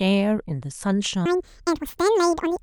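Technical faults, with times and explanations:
1.26 to 2.62 s, audio read two samples at a time (double speed): sample pairs are treated as single frames, so the speech plays twice as fast and an octave higher.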